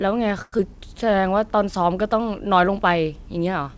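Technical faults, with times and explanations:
0.42–0.61 s, long network dropout: audio stops arriving, and the receiver stretches the last sound into a fading buzz for about 167 ms, then about 20 ms of near-silence. Roughly 60 ms of sound is lost outright, and the gap likely adds around 50 ms of delay.
0.67–1.22 s, jitter buffer slow-down: the receiver repeats single pitch periods to rebuild its reserve, adding 50 ms, so playback runs at 92% speed with unchanged pitch. Sounds are drawn out, against the G.722 path's band limit of 8 kHz.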